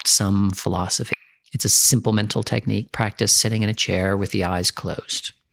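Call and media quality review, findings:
Skip ahead, 1.13–1.15 s: queued audio dropped in transit or by the jitter buffer, roughly 0.7 s of speech dropped with no fill, latency cut by about as much. Playback jumps straight forward; the two sides of the cut butt together.

Jitter buffer speed-up, 1.39–2.20 s: buffer over target, receiver trimming pitch-period fragments repeatedly, playback at 117% speed, around 150 ms removed. Speech sounds rushed, pitch unchanged.

Jitter buffer speed-up, 3.46–4.89 s: same mechanism, gentler, 107% speed, about 100 ms removed. Mild hurried pacing.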